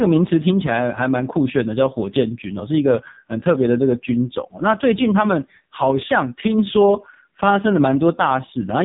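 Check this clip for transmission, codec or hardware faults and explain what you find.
The speech sounds buzzy, thin and synthetic from start to finish, with nothing above about 3.8 kHz. That is the AMR narrowband mobile codec at heavy damage. Its vocal-tract model, fed with very few pulses per frame, points to the lowest 4.75 kbps mode.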